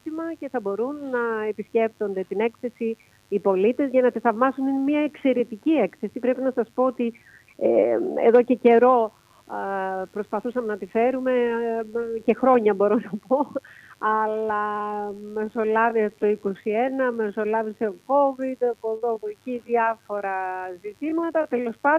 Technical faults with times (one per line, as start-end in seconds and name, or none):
0.00-21.99 mains buzz
14.09-21.99 time-stretched section
18.97-19.02 short stall from a late packet